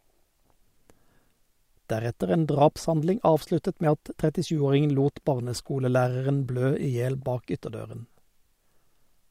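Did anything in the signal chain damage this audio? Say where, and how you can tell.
No, nothing along the chain has left a mark on this speech that I can hear, so there's no stage to point to.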